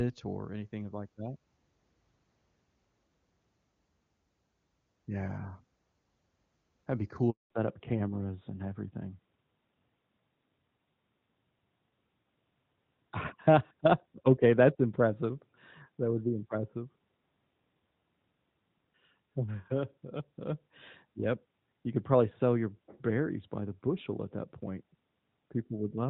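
At 7.30 s the speech cuts out abruptly, fading within a few tens of milliseconds into 0.2 s of dead silence before sound returns at 7.50 s. This is a handover gap: the call was being passed from one network connection to another, and no speech frames arrived while the switch took place. Whatever was said during that fifth of a second is simply missing, with nothing generated to cover it.

From 7.50 s to the end, the speech sounds noticeably duller and rougher, as if heard through an older telephone line. Sibilants lose their crispness and the airy top end disappears, with nothing left above 4 kHz. This is a fallback to narrowband. After the handover the call dropped from AMR wideband (HD Voice), which was clean before the gap and fits its top rate of about 24 kbit/s, to narrowband AMR, whose sound points to its 12.2 kbit/s mode.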